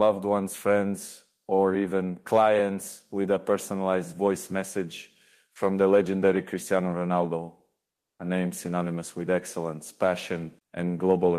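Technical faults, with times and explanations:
7.91–8.19 s, comfort noise in place of the background: for about 280 ms the faint real background gives way to a flat, featureless hiss about 15 dB quieter, likely from discontinuous transmission in the codec, unlike a gate or dropout, which would leave true silence.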